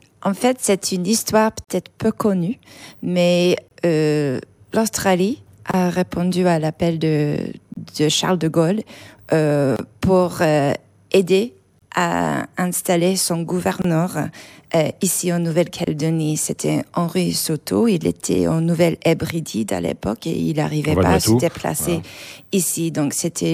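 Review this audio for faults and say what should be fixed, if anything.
There's a gap at a join of encoded pieces every 2 s, at 1.64, 3.68, 5.71, 7.74, 9.76, 11.79, 13.82 and 15.84 s. The first silence lasts about 40 ms and the rest about 27 ms. The encoder's start delay and last-frame padding were left in at each join. To fix it, trim that delay and padding before joining, or just encode the whole thing in one pass.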